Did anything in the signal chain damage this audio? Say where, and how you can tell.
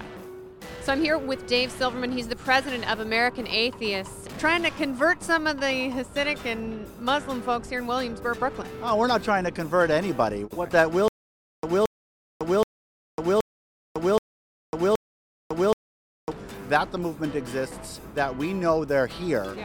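Yes: a stutter with silent gaps from 11.08 to 16.32 s, at the playback or stream buffer. The same 0.22 s burst repeats six times, each followed by 0.55 s of digital silence, every 0.77 s. This is likely a stalled stream replaying its last fragment on each retry, so the audio in between is lost.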